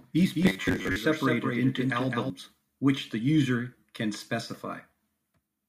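A second, slower capture path was likely mixed in, so from the very start until 2.3 s a doubled audio track trails around 200 ms behind, roughly 5 dB quieter, then stops abruptly. From 0.43 to 0.96 s, audio arriving too seldom likely forced repeats of a roughly 10.7 ms buffer, skipping about half the speech and producing robotic sound with a rigid 93.8 Hz metallic buzz.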